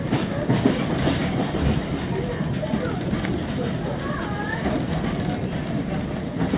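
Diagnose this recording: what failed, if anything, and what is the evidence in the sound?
Nothing failed in this recording. No stage between capture and playback leaves any audible trace of a fault in the sound.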